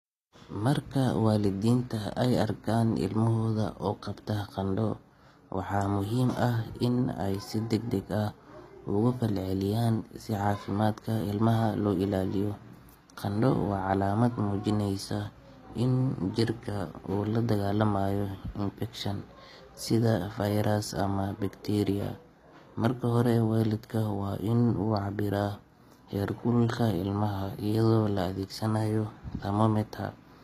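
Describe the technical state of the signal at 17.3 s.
At 17.3 s the speech carries the same damage heard across the whole clip, likely HE-AAC compression at a low rate, consistent with about 24 kbps. The codec keeps only the lower spectrum and resynthesizes the treble by copying lower bands upward under a coarse envelope, so the upper harmonics no longer align with those below. The top end stays bright but sounds synthetic, with gritty, lispy s sounds, and nothing is present above 14.9 kHz.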